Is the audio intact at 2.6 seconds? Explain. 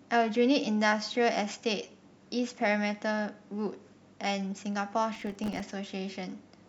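Yes, the speech at 2.6 seconds is intact, with no dropout, click, distortion or other fault heard at that point.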